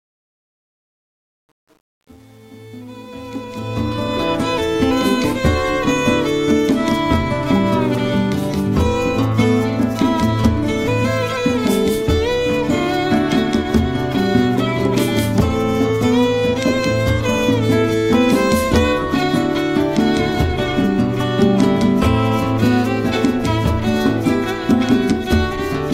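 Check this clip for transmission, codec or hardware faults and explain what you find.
One fault shows up, at the very start. Truncation distortion on a fade runs from 0.0 to 4.32 s. It is worst up to about 3.49 s. The quiet opening is rendered with so few level steps, consistent with roughly 9-bit resolution and no dither, that the waveform becomes coarse staircases. It sounds gritty. Unlike gate chatter or dropouts, the grit tracks the rising fade and clears as level grows.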